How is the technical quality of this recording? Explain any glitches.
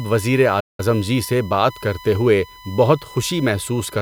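The recording has two technical faults.

USB whine, present throughout: current drawn in the USB bus's 1 ms frames is leaking into the audio path, producing a steady 1 kHz tone about 20 dB below the speech.

Playback stall, from 0.60 to 0.80 s: the player most likely ran short of data or had its thread blocked, so the speech cuts to silence for about 185 ms before resuming.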